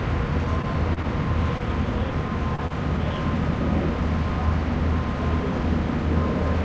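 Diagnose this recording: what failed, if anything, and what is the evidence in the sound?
The network and jitter-buffer stage produced two short stalls from a late packet, at 0.62 to 0.67 s and 1.58 to 1.63 s. In each, a packet arrived after its playout time, the buffer ran dry, and the receiver held the last sound for about 16 ms and then 19 ms before resuming exactly where it stopped. The result is a brief drawn-out moment with a slight buzz or dip and nothing skipped. Each stall pushes the rest of the audio later by the same amount, which separates it from a loss.

Three cases of short concealed packet loss, at 0.94 to 0.99 s, 2.56 to 2.61 s and 2.67 to 2.73 s, also come from the network stage, upstream of the decoder. Each time, about 30 ms of audio never arrived, and the receiver synthesised roughly 26 to 28 ms from the preceding sound before crossfading back. The result is a small smear or wobble where a brief transient can disappear. 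Unlike the stalls, real material is gone and the timing does not shift. The two losses at 2.56 and 2.67 s sit close together. Throughout the clip, the call codec's band limit at 8 kHz shapes the top end, which fits a G.722 link.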